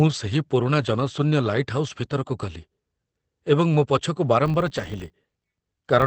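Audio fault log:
Throughout: Opus compression, the likely cause of the muffled, hoarse quality heard across the whole speech clip. Nothing sits above about 8 kHz, so the sound is confined to a wideband channel and lacks air and crisp sibilance. The damage is plainly audible: the roughness and dulled texture point to the codec's speech-oriented SILK mode, which models the voice rather than preserving its fine spectral detail, and fit a low bitrate around 16 kbps.
4.46 to 6.07 s: filter restarted on every block, heard as a steady 50 Hz buzz riding on the speech until the clip ends. A filter in the chain discards its memory at each block boundary and starts the next block from silence, so every block opens with a small transient. Those clicks repeat 50 times a second, which fits 20 ms blocks, and merge into a buzz whose loudness tracks the level of the speech.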